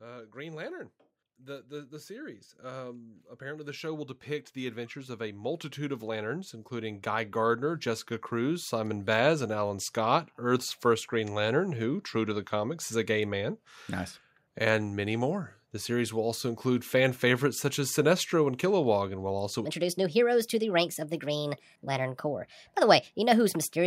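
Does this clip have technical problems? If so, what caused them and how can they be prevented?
Yes. From 1.47 s to 9.91 s there is automatic gain rising. The gain control judged the input too quiet and lifted it by about 16 dB. The voice and background swell together. Set a fixed input gain, or slow the gain control.

From 19.65 s to the end, there is a section at the wrong speed. It plays 1.37 times too fast, so the speech is high and hurried, roughly five semitones up. This likely came from playback or editing on the wrong clock. Match sample rates across every step.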